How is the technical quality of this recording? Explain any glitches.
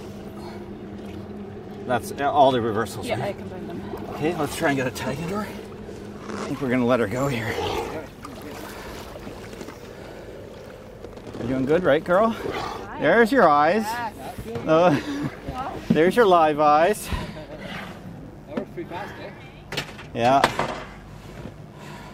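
The recording has one clear fault: a mains buzz in its final section. From 17.71 s to the end, a steady, raspy buzz sits under the sound. It sits at about 25 dB below the signal. The cause is interference from the 50 Hz mains supply. A dimmer, rectifier or poor shielding is the likely source. It creates sharp switching spikes twice per cycle. Those spikes spread into harmonics of 50 Hz reaching several kHz, which gives the buzz its harsh, gritty edge.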